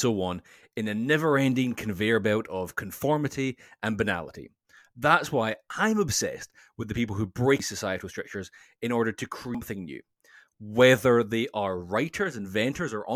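At 7.6 s, right after "with the people who", and again at 9.55 s, after "structures in order to", there's a brief glitch from damaged data in the compressed stream. Corrupted bytes there throw the decoder off sync until it finds the next good frame.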